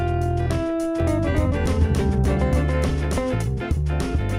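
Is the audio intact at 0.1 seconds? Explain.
Yes, at 0.1 s the audio plays through cleanly, with no dropout, click, distortion or other fault to be heard.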